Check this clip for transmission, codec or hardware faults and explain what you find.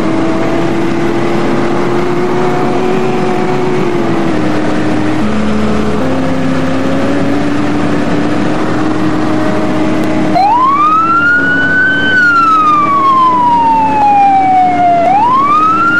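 Two short glitches point to overlap between stream segments. At 10.04 s and 14.02 s, a few milliseconds of sound vanish. They fall 4 s apart, which fits 4-second segments whose time stamps overlap. The player trims the overlap and the waveform jumps.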